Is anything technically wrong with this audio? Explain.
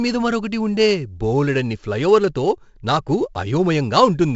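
Yes. 4-bit ADPCM compression runs throughout: each sample is stored as a coarse step from a prediction, so the error follows the level as heavy gritty hiss on louder speech and roughness on sharp onsets. Nothing sounds above 7.7 kHz, and this fits a 64 kbps stream.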